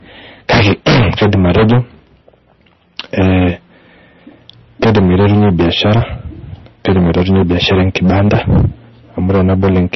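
From start to finish the speech is driven about 23 dB past full scale, so hard clipping flattens a large share of the waveform, something like a sixth of all samples. Every loud syllable turns into harsh fuzz. On a waveform the peaks sit as flat plateaus, and a spectrogram shows smeared harmonic energy reaching upward.

Also throughout, the audio carries heavy damage that is likely from MP3 compression at a very low rate, consistent with roughly 26 kbps. Nothing remains above 5.9 kHz, which a spectrogram shows as a sharp horizontal ceiling. Below it, weak components flicker in and out as blotchy patches, heard as a watery, swirling texture with smeared consonant onsets.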